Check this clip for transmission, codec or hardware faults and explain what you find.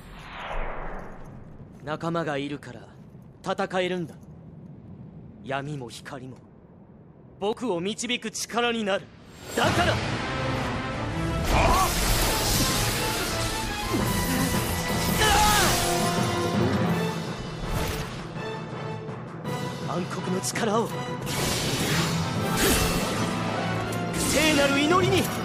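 No transmission, codec or hardware fault can be heard anywhere in the clip. Nothing in the sound points to a problem in the chain that carried or captured it.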